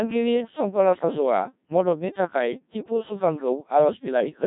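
From start to finish, the speech has passed through the Codec 2 vocoder, and the damage is heavy. Rather than keeping the waveform, the decoder rebuilds each frame from sine waves driven only by pitch, voicing, energy and a coarse spectral envelope. The result is robotic and buzzy, and the smearing points to a very low rate of about 1.3 kbit/s. A spectrogram shows rigid, evenly spaced harmonics with blurred formants. The waveform looks synthetic, unlike the natural speech shape.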